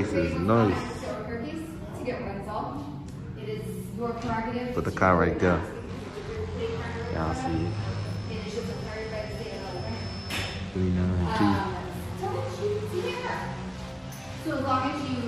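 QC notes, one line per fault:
6.92–10.67 s: feedback whistle. A thin tone at a single pitch of 5.2 kHz rings behind the sound, well below its level, swelling and fading slowly. The likely cause is a loudspeaker-to-microphone loop held right at the edge of feedback. One frequency keeps sounding but never runs away.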